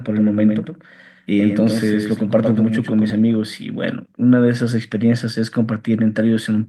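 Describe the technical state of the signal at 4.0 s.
Nothing is wrong with the signal at 4.0 s: the speech passes through intact, with no dropout, distortion or other fault audible at that point.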